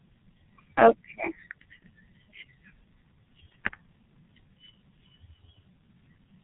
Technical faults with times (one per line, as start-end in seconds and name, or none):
0.00-6.44 G.723.1 codec
1.80-1.85 VoIP packet loss concealed by the speech codec